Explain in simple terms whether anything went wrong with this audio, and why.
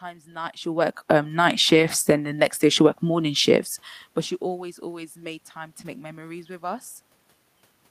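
Between 0.54 and 3.15 s, automatic gain rising makes the voice and the room noise swell together. The gain control judged the input too quiet and turned it up gradually. The separate level shifts near 0.5 and 3.5 s come from the talker moving.

A lost packet rebuilt from error correction shows up at 1.75 to 1.89 s, and again at 5.81 s, between "always always made time" and "make memories with". Each following packet carried a rough backup copy, so there is no silence, only briefly grittier sound.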